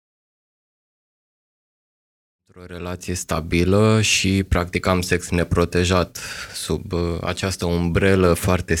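No technical faults can be heard in the recording. The speech comes in on a smooth fade that begins at around two and a half seconds and reaches full level by 3.7 s, with no click or hard edge.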